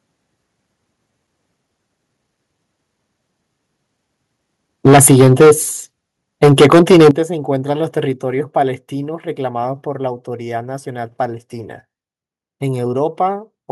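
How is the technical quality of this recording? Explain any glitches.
The speech in this recording has two stretches of harsh distortion, each tied to a sudden drop in level.

From 4.85 to 5.51 s and again from 6.42 to 7.10 s, the loudest syllables take on a gritty, crackling edge, the sound of microphone overload. The likely cause is input gain set roughly 11 dB too hot, so peaks hit the converter's ceiling and their tops are sheared flat. Close to a third of the samples are clipped in the first stretch, and about a fifth in the second.

At 4.87 s and at 7.11 s, the speech and the background fall abruptly together, about 4 dB the first time and about 12 dB the second. This is microphone volume stepped down, likely the call software reacting to the clipped peaks by cutting the device's input volume in a single step rather than a smooth fade. That is why each drop lands right around a distorted burst.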